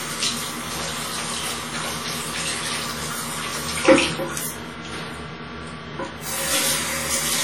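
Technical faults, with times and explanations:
Throughout, WMA compression: ringing, washy sound with hiss breathing along and nothing above 19.2 kHz, likely long transform blocks smearing quantisation noise, fitting a heavy 32 kbps encode.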